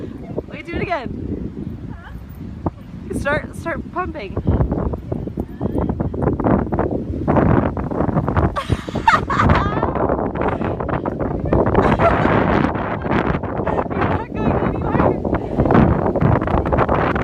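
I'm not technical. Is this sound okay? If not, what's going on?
Yes, this sound is okay, and there's nothing going on with it that needs fixing.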